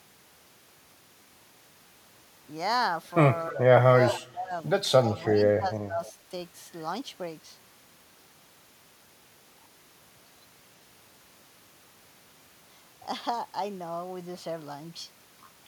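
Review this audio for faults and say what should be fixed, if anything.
Speech suppressed in double talk occurs at 3.51–3.62 s, 4.16–4.53 s, 5.10–5.16 s and 5.58–6.01 s. The speech level dips by about 5 dB in the short events and by about 15 to 20 dB at 4.2 s and 5.6 s, likely because the echo canceller mistook overlapping far-end speech for echo and attenuated both. A double-talk detector that holds adaptation and limits suppression during overlap would prevent this.

Echo leak appears at 5.18–5.25 s and 6.05–6.12 s as a brief, faint delayed copy of the voice, about 0.32 s behind it and roughly 25 to 35 dB down. This is likely residual loudspeaker pickup that the far-end canceller did not fully remove. Better residual echo suppression or a reduced loudspeaker-to-microphone coupling would prevent it.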